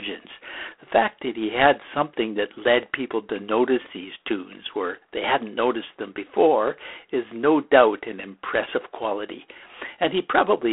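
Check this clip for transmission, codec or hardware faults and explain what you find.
Two faults are audible: a codec degradation running through the whole clip, and a high whistle that enters early and stays to the end.

G.726 ADPCM, throughout: the speech carries a harsh, rasping hiss that rises and falls with its level, inside a narrow telephone band of about 300 Hz to 3.4 kHz with nothing above 3.8 kHz. At 24 kbit/s the coder spends only three bits per sample on the error of its adaptive prediction, so quantisation noise becomes plainly audible.

Switching supply whistle, from 2.21 s (just after "fact that he had") to the end: a thin, high whistle, wandering between about 10.4 kHz and 15 kHz, sitting about 30 dB below the speech. A switching power supply running in an audible burst mode, its frequency shifting with load, produces this tone. Since it lies well above the codec's cut-off, it must enter after the telephone link.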